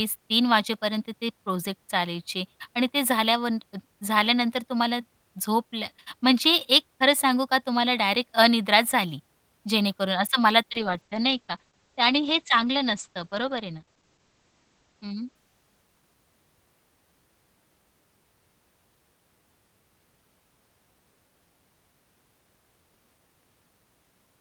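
From 10.73 s to 16.69 s the speech shows a call bitrate drop. The call's bandwidth estimate fell and the encoder was forced onto far fewer bits, which fits a fall from around 32 kbps to about 11 kbps. The coarser coding degrades the sound, and the audio band narrows from 20 kHz to 8 kHz, removing the top end. The lowest rate lasts about 4.1 s, and quality recovers by 16.69 s.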